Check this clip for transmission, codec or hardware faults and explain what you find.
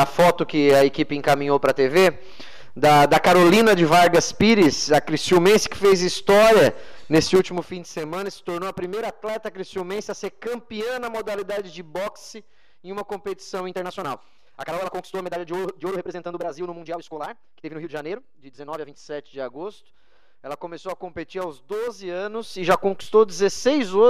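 One fault stands out. From 13.65 to 18.93 s the sound turns rushed, running about 1.62 times faster while its pitch stays put. This is likely a time-stretched section, where software squeezed the passage by dropping short slices to shorten it without raising the pitch.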